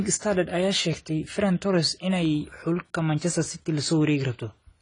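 From start to finish the speech sounds dull and smeared, with a fizzy, warbling edge on sibilants, likely from AAC compression at a low bitrate, fitting roughly 24 kbps. A spectrogram shows nothing above 10 kHz.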